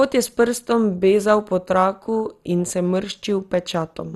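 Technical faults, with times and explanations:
Throughout, MP2 compression: the speech is dull, with nothing above about 12.2 kHz, and carries a plainly audible gurgling, granular texture. This is likely low-bitrate MPEG Layer II coding, in keeping with something near 64 kbps. Short of bits, the encoder switches off the upper sub-bands entirely and quantises the remaining bands so coarsely that their levels jump from block to block, which is heard as the grainy, bubbling edge on the speech.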